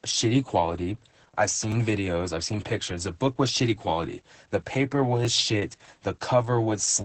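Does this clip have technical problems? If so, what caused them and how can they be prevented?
Yes. The speech shows heavy Opus voice compression throughout. At 10 kbps in SILK mode, coarse coding muffles it and nothing survives above 8.6 kHz. Prevent this by encoding voice at a higher bitrate.

Clicks recur every 1.76 s from 1.72 s to 7.01 s, about four in all, starting after "shitty quality I've". The likely cause is clock drift buffer slips. Two unsynchronised clocks differ by roughly 700 ppm, so a small block of samples is dropped or repeated. Prevent this by locking all devices to one shared clock.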